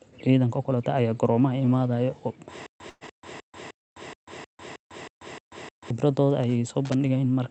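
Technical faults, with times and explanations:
2.66–5.90 s, stutter with silent gaps: a 169 ms fragment replays nine times, each followed by 137 ms of digital silence, repeating every 306 ms. This is likely a stalled player retrying. Unlike a freeze, the rhythm is strictly even and the audio meant for that stretch is lost.
2.89–3.04 s and 3.81–3.95 s, call audio freeze: the jitter buffer likely ran dry and the receiver extended the last sound for 116 ms and 110 ms. The first fill fades with 20 ms of silence at the end, and the second is silent throughout. Speech then resumes where it stopped, so nothing is skipped, only delayed.
6.85–6.95 s, loose connector crackle: a brief, irregular burst of scratchy crackle as a contact makes and breaks, chopping the signal. Its random spacing and gritty texture set it apart from the clean, evenly timed dropouts earlier, and it is unrelated to the Opus call path's 8 kHz band limit.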